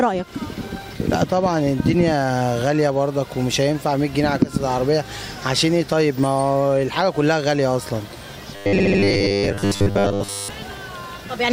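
From 8.56 to 10.50 s the sound takes on a robotic, metallic buzz pinned at 100 Hz. That's the signature of robotic sound from repeated short buffers, likely from audio arriving too late so the player keeps looping the last slice, which fits a 10 ms buffer, for most of that stretch.

Inside that, between 8.77 and 8.99 s, there's a stutter from repeated frames. A 72 ms block gets replayed three extra times, and the clip runs about 216 ms longer than it should.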